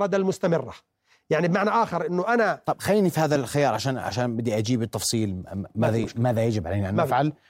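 Speech clip with two loud pops, at 3.35–3.38 s and 6.04–6.06 s, each a short sharp spike poking a few dB above the voice, likely an electrical glitch such as a switch or static discharge.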